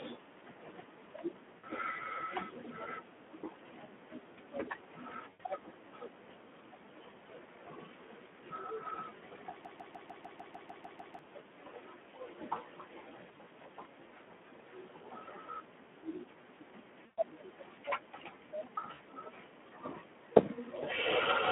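Throughout, the speech carries Speex codec damage: a narrow 200 to 3400 Hz band, plainly hoarse and noisy, consistent with roughly 11 kbps. VoIP packet loss concealed by the speech codec hits at 1.58 to 1.67 s (60 ms) and 5.29 to 5.41 s (100 ms). The decoder extends the last pitch and filter into a fading buzz or coloured noise, and the voice stays thin briefly afterwards. From 9.65 to 11.19 s a broken-record loop repeats a 150 ms fragment ten times back to back, likely from a stalled stream, and the audio due there is lost. Concealment returns at 13.31 to 13.49 s as short 20 ms gaps scattered over 160 ms. It recurs at 17.05 to 17.19 s (120 ms, the longest fade) and at 18.93 to 19.02 s (60 ms).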